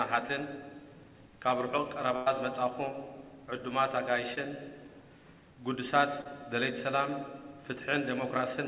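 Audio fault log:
2.16–2.28 s, burst of packet loss: about 100 ms missing, bridged by a held and fading copy of the previous sound, so the spectrogram shows smeared, decaying stripes before the audio jumps ahead.
4.34–4.38 s and 6.22–6.27 s, short concealed packet loss: gaps of 16 and 32 ms, with 20 and 40 ms of audio missing, patched by extending the prior sound, heard as brief smears, with a blurred spectrogram patch.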